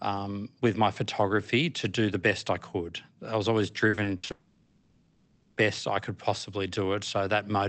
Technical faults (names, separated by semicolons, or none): repeated packet loss (robotic sound); long network dropout